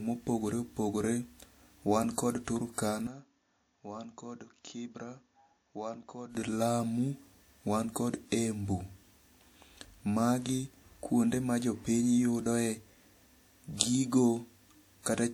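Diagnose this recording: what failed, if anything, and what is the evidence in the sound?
Codec stage. The file carries the artefacts of an earlier low-bitrate encode throughout: smeared, swirly high-frequency detail and pre-echo on transients that a 192 kbit/s MP3 would not produce by itself. The spectrum extends to about 20.1 kHz, so no narrow cut-off gives it away. The character points to a first pass at around 64 kbit/s in early WMA, likely low-bitrate audio saved at a high bitrate. Re-encoding kept the damage and restored nothing.

Capture stage, driver level. From 3.07 s to 6.35 s the speech turns dull and boxy. Content above 7.1 kHz disappears and the level falls by about 10 dB. A new background noise sits roughly 50 dB below the speech. Both transitions are seamless, with no gap in the audio. The narrower band, changed tone and separate noise floor indicate an input switched to a poorer device, likely a headset call profile or a second microphone, before the original input returns.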